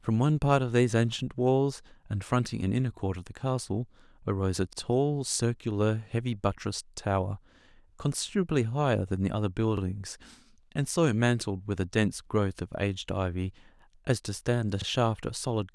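Speech with overlapping chunks: at 4.73, 9.77 and 14.82 s, about 43 ms repeats where 5 s processing blocks join, causing a brief stutter. A waveform shows duplicated cycles at each seam, and a spectrogram shows a thin vertical discontinuity there.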